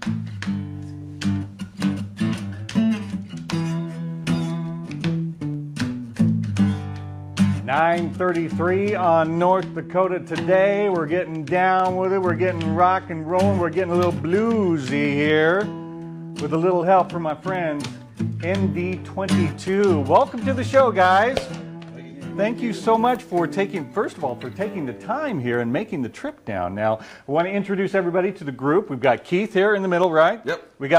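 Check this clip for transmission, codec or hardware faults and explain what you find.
One hardware fault is present: periodic USB or driver dropouts. They run from 0.29 s to 30.78 s. A brief loss recurs every 0.25 s, four times a second, well over a hundred times in all. Something is stalling the USB bus or audio driver on a fixed schedule. Each stall drops a tiny fraction of a millisecond of audio, which is skipped rather than filled. The resulting splice makes an evenly spaced tick, heard only while sound is present.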